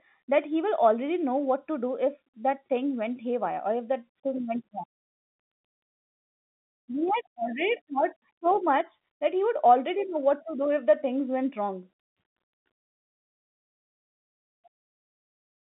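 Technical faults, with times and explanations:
No technical faults can be heard in this telephone-band speech.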